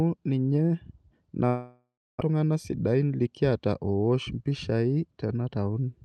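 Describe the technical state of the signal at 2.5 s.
At 2.5 s the receiver's jitter buffer speed-up is in progress, running from 2.30 to 3.69 s. The buffer had built up more audio than its target, so the receiver repeatedly cut out short stretches of one or a few pitch periods to drain it, about a tenth of a second in total. The speech plays at roughly 108% speed with its pitch unchanged, so this span sounds rushed and compressed in time.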